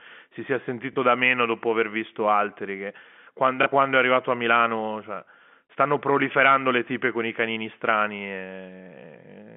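At 0.93 and 3.63 s, just after "si sia" and right before "quando è arrivato a", packet loss with last packet repeated fills a 30 ms gap, giving a brief blip.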